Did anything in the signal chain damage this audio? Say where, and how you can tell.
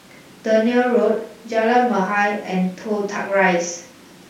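No, nothing in the signal chain damaged this audio.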